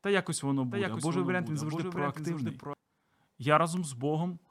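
Right after "та якось воно", at 0.71 s, a doubled audio track kicks in: a second full-band copy of the speech trails around 0.7 s behind, roughly 5 dB quieter, with no room tail. It cuts off abruptly at 2.73 s, likely from a slower second capture path.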